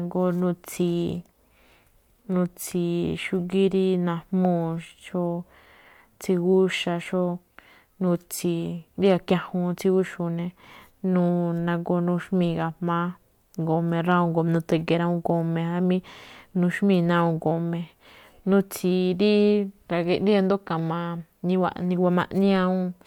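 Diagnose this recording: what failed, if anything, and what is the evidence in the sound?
A gain stage ahead of the converter, or a fixed-point format conversion, ran out of headroom on the loudest speech peaks, producing hard clipping. The flattened peaks are heard as brief crackles at 4.45 s, from 14.11 to 14.15 s, and at 15.30 s, overdriven by about 2 dB, 1 dB and 0 dB respectively. Cutting the waveform tops flat adds high harmonics, so each peak carries a short burst of edgy distortion rather than sustained fuzz.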